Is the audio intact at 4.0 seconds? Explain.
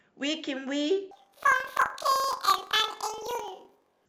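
No. At 4.0 seconds the speech is affected by planar audio read as interleaved, running from 1.11 s to the end. Blocks of 2048 samples, about 42.7 ms long, which fits planar storage, are read as alternating pairs. So each block plays twice at double speed, left then right. The speech sounds an octave high, with a flutter at 23.4 Hz.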